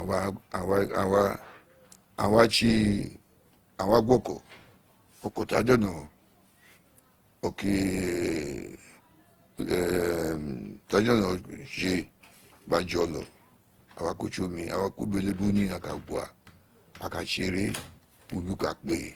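From the first second to the end, the speech carries a swirly, hollow smear, with consonant attacks blurred, and nothing above 20.2 kHz. This is generation loss, likely from the audio being re-encoded about seven times through a lossy codec whose character fits Opus at 48 kbit/s. Each pass quantised on a shifted frame grid, so the damage compounded. A single encode at that rate would sound cleaner.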